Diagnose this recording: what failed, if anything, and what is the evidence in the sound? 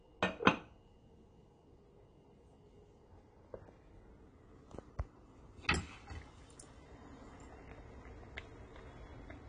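The codec stage is the likely culprit: it sounds like AAC compression throughout. Nothing survives above about 10.1 kHz, and the sounds come out dull and smeared with a warbly, fizzy edge, which fits AAC-LC at a low bitrate around 32 kbps starving the upper bands.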